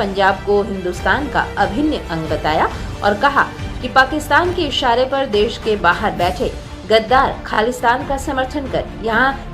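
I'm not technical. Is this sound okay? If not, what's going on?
No. At about 7.54 s there's a brief stutter. This is a repeated buffer: new sound arrived late, so the player replayed the last tiny chunk twice more. Each repeat lasts about 20 ms, so it sounds like a quick buzz until 7.58 s.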